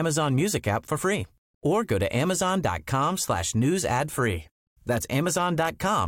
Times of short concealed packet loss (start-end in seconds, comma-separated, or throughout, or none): none